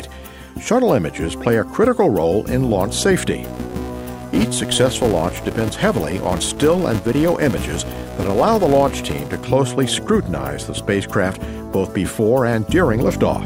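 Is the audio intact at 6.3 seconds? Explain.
No. A steady 375 Hz buzz tracks the level from 3.45 to 9.45 s: the filter restarted on every block, fitting 128-sample blocks, so each one opens with a small click.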